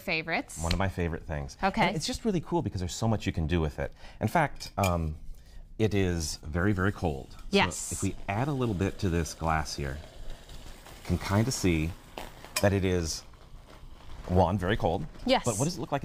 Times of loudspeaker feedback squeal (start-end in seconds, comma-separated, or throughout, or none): none